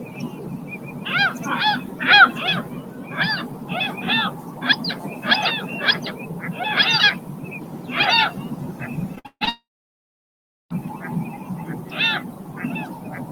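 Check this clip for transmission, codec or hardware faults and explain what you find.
Two transmission faults occur back to back near the end.

From 9.15 to 9.49 s, repeated packet loss causes robotic sound. Four gaps, the longest 142 ms, are patched by extending prior audio, which gives choppy robotic stutter rather than one clean silence.

From 9.49 to 10.72 s, the sound decays into about 1.07 s of silence and resumes with that section missing, likely a long network dropout, distinguished from stutter by its sustained hush.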